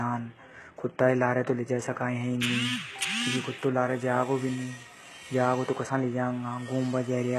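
Throughout the speech there is heavy codec damage, likely from HE-AAC compression at a bitrate near 16 kbps. Nothing remains above 12.3 kHz, and the treble below is rebuilt from copied lower bands, so harmonics misalign and s sounds turn gritty and metallic.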